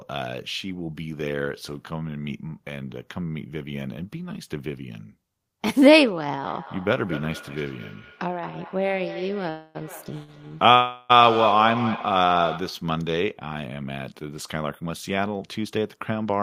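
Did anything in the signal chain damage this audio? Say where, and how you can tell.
Yes. Four kinds of damage are audible, all in the call path.

Feedback echo between two devices runs from 6.42 to 12.94 s. This is an acoustic loop in the room, not a wiring fault. Each phrase returns about every fifth of a second, thinner and more ringing each pass. The repeats peak at about 7 dB below the speech. A second device is playing this call aloud, and its sound re-enters a microphone. That microphone's echo canceller only removes its own playback, so the loop survives.

Two call audio freezes sit inside the echo. The first runs 9.49 to 9.77 s and the second 10.75 to 11.12 s. In each, the last sound is drawn out and fades, for about 254 ms and then 348 ms. Nothing drops to silence. Speech resumes exactly where it stopped, so nothing is lost, only delayed. The likely cause is network delay emptying the jitter buffer, with the receiver filling the wait.

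Two shorter stalls from a late packet follow at 10.23 to 10.30 s and 10.48 to 10.53 s. These are network and jitter-buffer events. A sound is held too long, by 54 ms and then 27 ms. The packet was missing when due, and the receiver stretched the previous sound until it came. Playback then continued from the same point. The delay grows each time, and no speech is missing.

Jitter buffer speed-up runs from 14.23 s to 16.4 s. Speech plays about 10 percent fast and sounds hurried, but the pitch is unchanged. The buffer had built up more delay than it aims for. To trim it, the receiver cut many tiny pitch-period slices in a row, around a fifth of a second in total. That removes time without the chipmunk shift a plain resample would cause.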